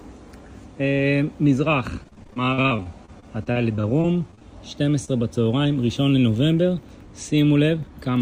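It's a short audio clip, and the rough patch is from 2.03 to 4.43 s, where you get repeated packet loss with that robotic sound. The dropouts come thick and fast, with the longest around 39 ms. About 400 ms of audio went missing in total, and the receiver stretched the last good sound over about 527 ms to cover it. That means roughly 22% of that stretch is synthetic fill, which is why it turns choppy. A little later, around 5.05 to 5.09 s, there's a single short concealed packet loss. About 20 ms never arrived in time, so the decoder carried the preceding sound forward for around 25 ms and blended back in. You hear it as a brief smear or wobble rather than an obvious gap.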